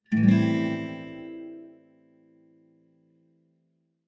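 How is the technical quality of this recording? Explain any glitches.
The quality suffers from one problem that runs through the whole recording. Throughout, a noise suppressor applied to music or sounds treats sustained tones and tails as noise, cutting them by around 20 dB, so the sound pumps and thins. The waveform shows intact onsets with decays collapsing abruptly, and the spectrogram shows held energy flickering, all below the 8 kHz ceiling of the call microphone processing.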